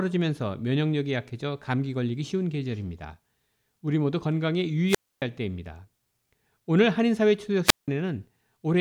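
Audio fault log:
4.88–5.22 s and 7.65–7.88 s: wireless microphone squelch dropout. Each time the FM radio link weakens, hiss rises briefly, then the receiver's squelch cuts the output, leaving near silence for 273 ms and 176 ms respectively before the speech returns.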